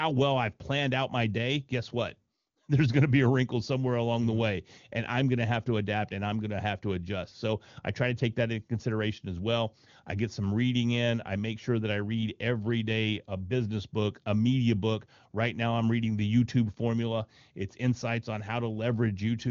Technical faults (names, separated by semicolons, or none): none